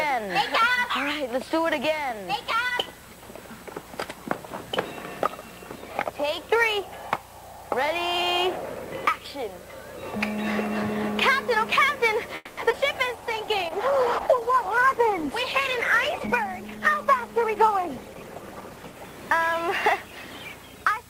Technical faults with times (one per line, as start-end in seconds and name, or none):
0.00-5.76 doubled audio track
12.35-12.59 call audio freeze
12.69-12.72 short concealed packet loss
12.72-12.75 skip ahead
13.16-14.86 jitter buffer slow-down
13.17-19.02 call bitrate drop
15.78-16.49 jitter buffer speed-up
16.92-18.84 jitter buffer speed-up